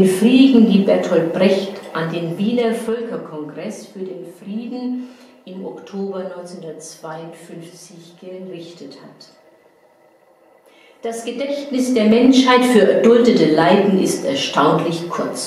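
From 1.98 to 3.28 s the level drops by roughly 15 dB, and from 11.16 to 12.36 s it climbs back by about the same amount. Both moves show zipper noise: the gain jumps in 2 dB steps, around seven per second, with no smoothing, so each jump clicks and a fast ticking rides on the sound. A waveform shows a staircase envelope, and a spectrogram shows thin vertical broadband lines at every step.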